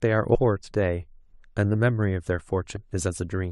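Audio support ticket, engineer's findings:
Compressed frames skipped, two dropouts. 0.34–0.36 s: speech jumps ahead, roughly 0.4 s lost, around fifteen 23.2 ms frames. 2.75–2.77 s: smaller jump, roughly 0.1 s, about five frames. Decoder side: frames missing or rejected as corrupt. Spectrogram shows harmonics abruptly misaligned. Waveform shows envelope discontinuity.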